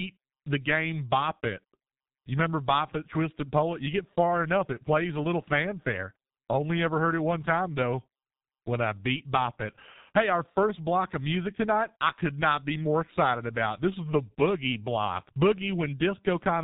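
From start to finish the speech sounds muffled and hoarse, with consonants smeared together and nothing audible above 4 kHz. The damage is heavy, and it comes from the G.723.1 codec, an early internet-telephony coder that models the voice in 30 ms frames and updates that model slowly. Its narrow band removes the upper range, and the low bitrate, which fits roughly 6.3 kbit/s, leaves too little detail to keep fast consonant transitions distinct.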